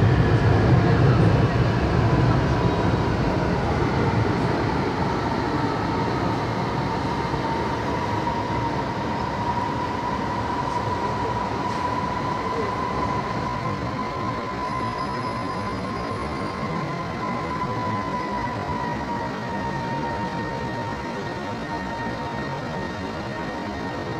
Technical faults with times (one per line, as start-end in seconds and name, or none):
13.45-24.19 time-stretched section